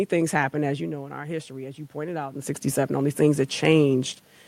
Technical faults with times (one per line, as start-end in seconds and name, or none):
0.70-2.68 automatic gain rising